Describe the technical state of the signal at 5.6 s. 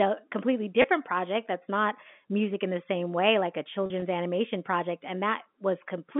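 At 5.6 s the speech is intact, with only the narrow band and faint level-following hiss of its G.711 telephone coding.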